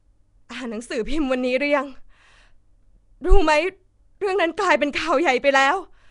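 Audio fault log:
throughout Nellymoser compression: plainly rough, hissy, smeared speech with nothing above 10.6 kHz, likely from Nellymoser Asao coding near 44 kbps filling starved bands with noise.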